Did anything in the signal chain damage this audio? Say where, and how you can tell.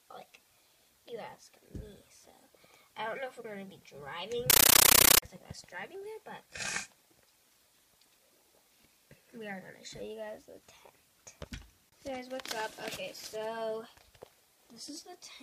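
Yes. At playback, a compressed stream was played as audio: undecoded AC-3 data became loud static bursting 31 times a second, from 4.50 to 5.22 s.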